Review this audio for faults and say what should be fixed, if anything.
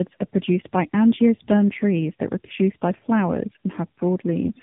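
Tandem speech coding affects the whole clip. The speech sounds rough, muffled and warbly, which points to two AMR-NB-style narrowband coders in a row with a plain telephone-grade link between them. Each coder re-encodes the previous one's artefacts, so the damage compounds. On a spectrogram, energy stops sharply near 3.8 kHz and the formant bands look smeared and blotchy. The waveform shows no distinct events. To prevent it, keep one codec end to end using transcoder-free operation, so the speech is encoded only once.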